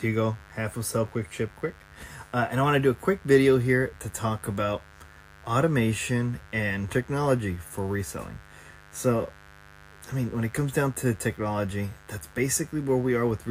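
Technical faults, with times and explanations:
Throughout, mains buzz: 50 Hz switching spikes, twice per cycle, spread harmonics to several kilohertz, producing a steady raspy drone about 25 dB below the speech.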